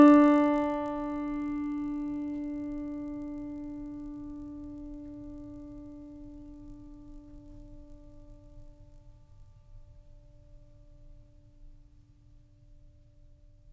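From 0 to 9.6 s, resampler restarted on every 20 ms block leaves edge errors: a 50 Hz buzz, seen as regular vertical spectrogram stripes.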